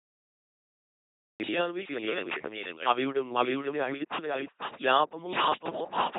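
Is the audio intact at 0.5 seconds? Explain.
No. At 0.5 s you're inside a cut-off start: from 0.0 to 1.40 s there's just dead digital silence, and then the sound jumps in mid-stream at 1.40 s with no attack or fade. The capture or stream clearly started late, so the beginning of whatever was being said never made it in. That hard entry at 1.40 s is the first audio anyone hears, and it lands abruptly.

The same stretch also carries two faults that run through the whole clip, so that silent lead-in isn't hiding clean audio. First, a doubled audio track: a second, full-band copy trails the original by around half a second at roughly the same level, with no decay or room colour. It sounds like a hard, dry repeat stepping on everything. The likely cause is the signal being captured twice, once through a slower path, or an edit leaving two copies out of step.

Second, heavy LPC-10 vocoder damage, which fits that codec's 2.4 kbit/s rate. 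Each moment is rebuilt either as a buzzy pulse train or as noise pushed through a simple vocal-tract filter, so the speech comes out as a mechanical robot voice. Where it gets the voiced-or-unvoiced call wrong, you get stray buzzes or hiss, and there's nothing above 3.8 kHz.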